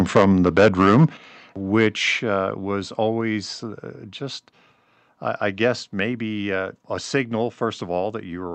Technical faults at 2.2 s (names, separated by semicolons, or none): microphone volume stepped down